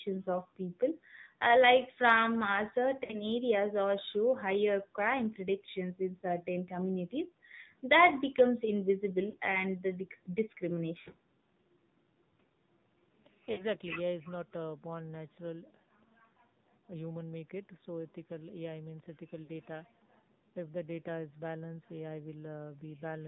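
From start to end, the speech carries the sound of the AMR narrowband mobile codec. Nothing above 4 kHz comes through, so the top end is gone. The codec rebuilds the voice from a vocal tract model driven by a few pulses per frame. Here the damage is plainly audible. The voice sounds buzzy and synthetic, which fits a low AMR-NB mode of about 7.4 kbps.

Five short dropouts follow. These are lost AMR speech frames. They occur at 3.04 to 3.18 s, 9.30 to 9.36 s, 11.02 to 11.08 s, 13.52 to 13.62 s, and 19.44 to 19.51 s. The gaps last 60 ms, 40 ms, 40 ms, 60 ms, and 40 ms, which fits runs of two or three 20 ms frames. In each gap the decoder repeats the last good pitch and tract settings at falling gain. The result is a brief smeared dip or warble, and then the voice returns rough for a moment.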